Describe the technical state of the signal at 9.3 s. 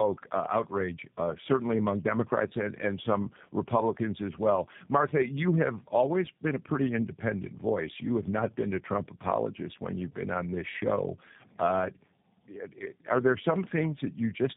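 At 9.3 s the speech shows tandem speech coding, which runs through the entire clip. The signal has been decoded and re-encoded at successive network borders, so the second low-rate coder models output the first had already degraded, compounding its errors. The result is rough, muffled, warbly speech with nothing above about 3.8 kHz, which fits two passes through an 8 kbit/s coder such as G.729A, with a G.711 link between them.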